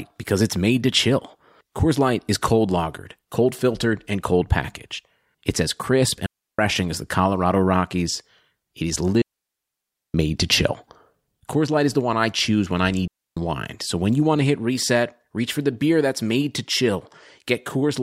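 Digital wireless dropouts at 6.26 s (0.33 s, after "as crisp"), 9.22 s (0.93 s, before "to chill") and 13.07 s (0.29 s, after "choose when I need"): the receiver mutes on lost data, leaving clean, near-silent holes with no surrounding noise burst, unlike analogue wireless hits.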